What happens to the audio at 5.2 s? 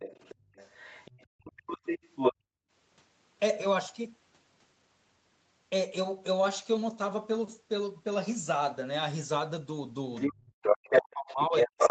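At 5.2 s the speech is intact, with nothing beyond the normal call microphone processing, which trims the lowest bass and leaves nothing above 8 kHz.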